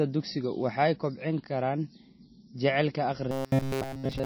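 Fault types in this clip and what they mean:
MP3 compression: The whole clip carries plainly audible low-bitrate codec damage, likely from MP3 encoding at a rate that fits roughly 27 kbps. With bits that scarce, weak frequency lines drop in and out between frames, giving the speech a watery, swirling texture, and consonant onsets come out smeared rather than crisp.
Robotic sound from repeated short buffers: From 3.31 s to the end of the clip the speech turns into a rigid metallic buzz at 134 Hz. The likely cause is playback starving for data and filling each gap by looping the most recent short slice of audio, so most of this stretch, around seven tenths, is repeated material rather than new sound. A repeat period near 7.5 ms imposes that fixed pitch, while the original syllable pattern still shows through loosely.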